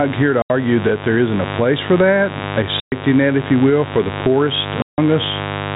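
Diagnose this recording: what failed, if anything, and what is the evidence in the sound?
Mains buzz, analogue wiring: a steady, raspy 50 Hz buzz runs throughout at about 15 dB under the speech. Sharp switching spikes from a dimmer, rectifier or missing shield are leaking in.

Gain pumping, call processing: the gain swings by roughly 10 dB, pulled down under each loud syllable. The likely cause is mic gain set far too high, with a fast limiter clamping down on every peak.

Packet loss filled with silence, network: there are hard-edged holes at 0.42 s (80 ms, after "here to"), 2.8 s (120 ms, after "place for that a") and 4.82 s (160 ms, after "will for the poorest"). All are multiples of 20 ms, which fits lost 20 ms packets replaced by silence.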